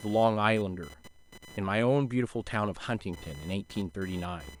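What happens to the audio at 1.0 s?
At 1.0 s you're hearing computer activity noise, which runs through the whole clip. Processor or peripheral load shifts the shared audio ground, leaving a buzzy whine pulsing at around 1 kHz, sitting about 25 dB under the speech and independent of it.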